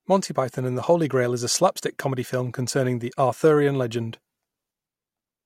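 From 1.99 s, just after "is slapstick", through to the end, a fine hiss and grainy roughness rides on the speech, thickening on louder and brighter sounds and dropping away in the pauses. This is sample clock jitter: the converter's clock wanders by roughly a microsecond, so each sample lands slightly early or late. Steeper parts of the waveform therefore pick up larger errors, leaving a signal-dependent noise floor sitting around 45 dB below the speech.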